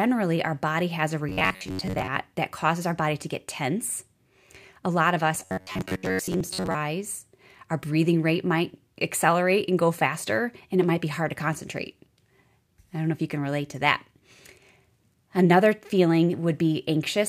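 Speech with robotic sound from repeated short buffers at 1.29–2.08 s and 5.35–6.76 s: a rigid metallic buzz near 94 Hz replaces most of the audio, likely from a roughly 10.7 ms chunk being looped, unlike dropouts, which go silent.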